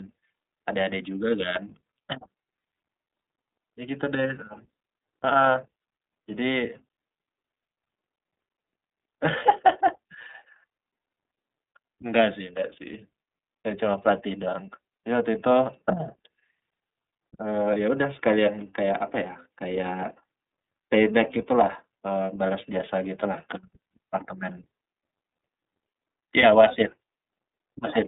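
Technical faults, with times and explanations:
Throughout: iLBC codec. The speech sits in a narrow telephone band of roughly 250 Hz to 3.7 kHz, so it sounds thin and lacks sibilant air. The coder rebuilds each 30 ms frame's excitation on its own rather than predicting from the frame before. The low-rate coding gives the plainly audible rough, slightly synthetic buzz. The damage fits the 13.33 kbps mode.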